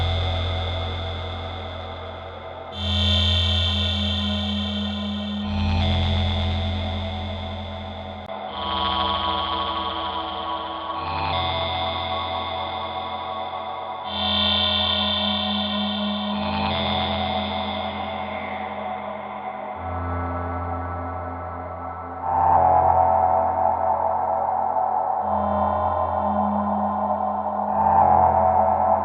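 At 8.26 s a gap of about 20 ms opens, and from there to the end the sound is band-limited, with nothing above 5 kHz. It turns duller and boxier, and a new background noise sits roughly 40 dB under the signal, while the overall level stays about the same. This is likely an input switched to a poorer device, such as a second microphone or a headset call profile with a narrower passband and its own noise.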